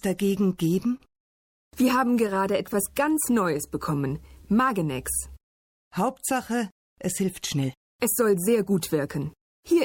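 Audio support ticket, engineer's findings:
Short stall from a late packet, 0.97–1.03 s: one packet missed its playout slot and the jitter buffer ran dry. The receiver held the last sound for about 22 ms until the packet landed, then resumed where it left off, with nothing lost. The held sound gets a brief buzz or dip, and latency rises by 22 ms afterward.

Repeated stalls (stutter), 2.07–3.62 s: packets kept arriving late or below the playout rate, so the buffer underran 12 times. Each gap was bridged by extending the last sound, none longer than 14 ms, for 122 ms filled in total, about 8% of the span. Nothing is missing, but the sound drags and stutters.

Jitter buffer slow-down, 3.66–5.03 s: the buffer was low or had just raised its target delay, so the receiver repeated single pitch periods and slices of pauses to rebuild its reserve, adding 105 ms. Playback runs at 93% speed with unchanged pitch, giving stretched sounds.

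Jitter buffer speed-up, 7.21–9.29 s: the buffer sat above its target, likely after delayed packets arrived in a bunch, so the receiver cut short runs of one or a few pitch periods, about 150 ms in all. Playback runs at 107% speed with the same pitch and sounds rushed.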